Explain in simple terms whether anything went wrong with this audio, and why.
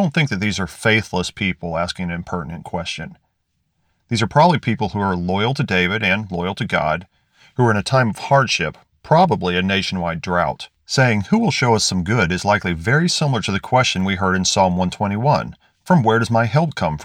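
No faults can be heard.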